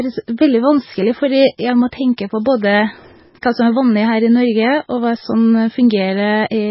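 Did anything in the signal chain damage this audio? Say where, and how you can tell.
Yes, at the codec stage, for the whole clip. The speech has nothing above 5.5 kHz and sounds watery, with swirling sibilants. That is likely heavy MP3 compression at a very low bitrate, around 16 kbps. The encoder cut the treble and dropped weak frequency lines frame by frame.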